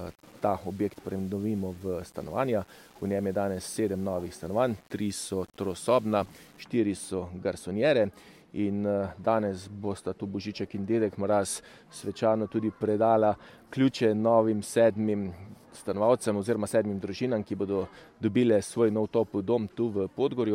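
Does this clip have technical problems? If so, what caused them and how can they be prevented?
Yes. From 0.00 to 6.63 s the sound is grainy, with distortion that tracks the signal, roughly 30 dB below it. The likely cause is low bit depth without dither, consistent with 8-bit rounding. The waveform shows visible stair-steps, and the spectrogram shows signal-correlated noise smeared across frequencies. Prevent it by keeping at least 16 bits and applying dither before any reduction in word length.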